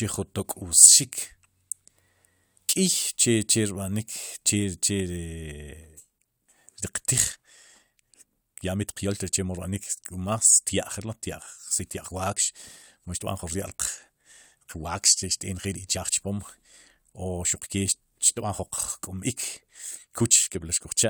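From 5.5 s to the end, the speech suddenly rushes ahead at about 1.41 times its earlier pace, sounding rushed while the pitch stays put. This time-stretched section was likely squeezed by software dropping short pieces to shorten it.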